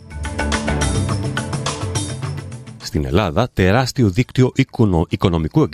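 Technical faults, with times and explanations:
No technical faults can be heard anywhere in this audio.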